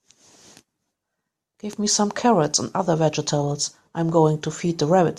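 Speech recording with no audible technical faults at any point.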